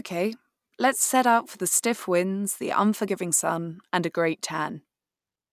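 Speech recording, and nothing is technically wrong with it.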